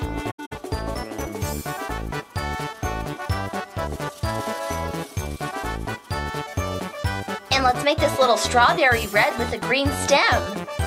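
From 0.30 to 0.53 s, AAC frame loss with muting leaves soft-faded gaps totalling about 150 ms, the longest lasting roughly a tenth of a second.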